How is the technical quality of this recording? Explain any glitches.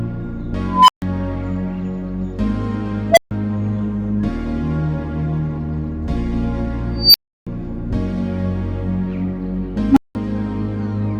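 The recording is marred by a recurring unstable filter fault. A recursive filter runs away, so a tone swells, clips and cuts to silence. At 0.68 s it builds over 0.21 s near 1 kHz. At 3.11 s it builds in 58 ms near 700 Hz. At 6.98 s it builds over 0.16 s near 5 kHz. At 9.86 s it builds over 0.1 s near 300 Hz. Silences of 0.14 s, 0.14 s, 0.33 s and 0.19 s follow.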